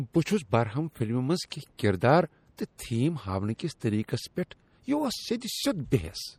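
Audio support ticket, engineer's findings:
Watery, swirly speech texture throughout, codec damage plainly audible. Likely cause: MP3 compression at a low bitrate, consistent with around 48 kbps. Weak frequency lines zeroed and switching on and off frame to frame. Unlike steady background hiss, artefacts track the content.

Pre-echo at 2.57 s: brief hiss, about 14 ms, just ahead of an attack, which sounds softened. Component: transform codec block. Quantisation noise sized for the loud attack spread into the quiet moment before it. Unlike a click, it arrives before the attack.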